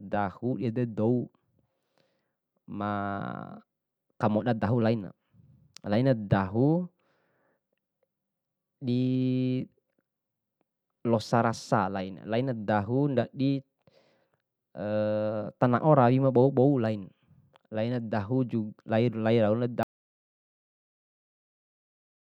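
At 19.83 s the speech cuts off abruptly and the rest of the clip, about 2.45 s, is an audio dropout to silence: silence with no room tone. The input was likely lost, through a disconnection or mute, while recording continued writing silence.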